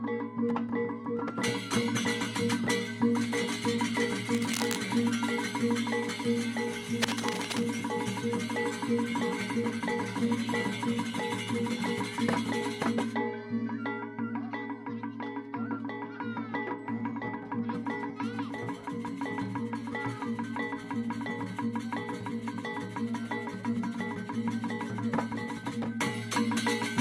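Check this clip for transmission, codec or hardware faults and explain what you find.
Two bursts of cable scratch noise occur, from 4.34 to 4.77 s and from 7.02 to 7.63 s. A worn cable or connector being shifted likely caused them, its contact resistance flickering rapidly. The result is dense, ragged scratching laid over the sound, roughly 5 dB below the signal.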